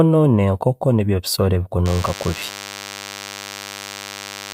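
A nearby DECT cordless phone or its base station is firing a short radio burst every 10 ms, and something in the audio chain is rectifying that energy into the signal. In this speech clip the DECT cordless phone buzz starts at 1.86 s, just after "nibyo ebiisooro", and runs to the end: a steady, thin 100 Hz buzz rich in harmonics, sitting roughly 15 dB below the speech.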